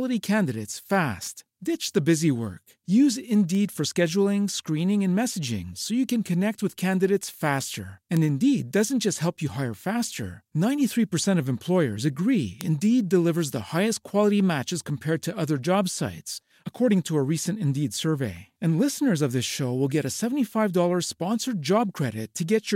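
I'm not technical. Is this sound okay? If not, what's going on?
No. In this speech there are four sudden, sharp ticks, at about 3.55, 7.23, 8.17 and 12.61 seconds, each like a click from nowhere. The ones at 8.17 and 12.61 are the loudest. This is a bit error spike: a single digit in the stored or transmitted audio flipped, so for an instant one sample, or two in a row, leaps far off, then snaps straight back.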